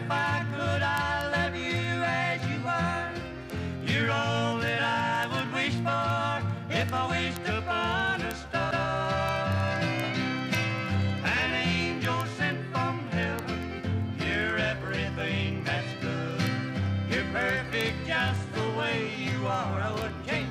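From 0.11 s to 20.49 s a steady train of word clock ticks runs through the whole clip, one roughly every 0.07 s, around three hundred in all. The receiving device is clocked independently of the digital source, off by something like 300 ppm, so each time the two clocks slip a sample is dropped or doubled. Random clicks from damage would fall irregularly. These stay evenly spaced for the entire length, which points to clock drift.

At 8.71 s a stretch of 185.8 ms plays once, then plays again straight away, ending at 8.90 s. This is repeated frames: a block of compressed data, which fits two codec frames, was delivered twice. The decoder simply replays it, adding 185.8 ms to the running time. A skip would remove material instead, and a dropout would leave silence. Here the same brief fragment is heard twice in a row, as a stutter.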